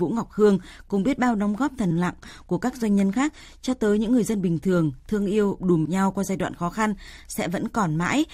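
Compressed frames skipped, at 1.90 s and 5.85 s: after "biết bao đóng góp" the speech lurches forward about 40 ms, roughly two frames, into "lặng của các doanh". After "thường thương yêu đùm" a larger gap of about 150 ms, around seven frames, drops before "nhau qua giai đoạn". Each jump fits whole frames of about 21 ms going missing or being rejected by the decoder.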